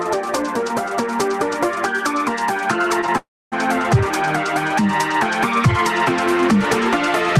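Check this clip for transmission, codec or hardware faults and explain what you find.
There's one fault, a call audio freeze from 3.18 to 3.54 s. The last bit of sound before it smears on as a short fading buzz, then drops to silence for about 270 ms before the audio picks up exactly where it left off. That's likely packets stalling in transit so the jitter buffer ran dry. Nothing gets lost; about 341 ms of filler is inserted, so everything after is pushed that much later.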